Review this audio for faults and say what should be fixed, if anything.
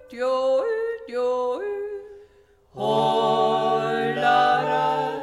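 No faults found; nothing needs fixing.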